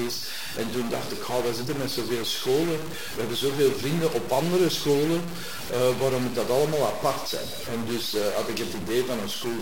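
From start to finish the sound carries harsh, buzzy distortion, and even the pauses fill with a grainy noise floor, likely from a stuck bit: one data bit pinned high or low, throwing many samples off by a fixed step near -30 dBFS. The waveform shows stepped offsets, and the spectrogram shows broadband haze.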